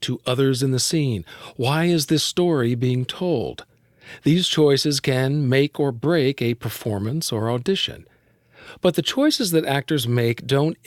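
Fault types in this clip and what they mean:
Nothing here for this list, since no technical faults turn up anywhere in the recording.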